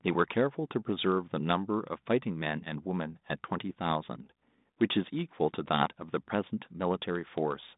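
Listening through the speech, nothing stood out as a fault.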